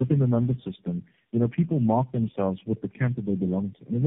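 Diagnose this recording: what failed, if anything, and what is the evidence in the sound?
The fault is tandem speech coding, a codec-stage failure present from start to finish. The speech is band-limited with nothing above 3.7 kHz, and it sounds rough, muffled and warbly, worse than a single narrowband codec would produce. That points to a chain of around four low-rate speech coders in series, AMR-NB and GSM full rate, joined by G.711 links. Each one decodes and re-encodes the previous coder's already degraded output, so the errors accumulate.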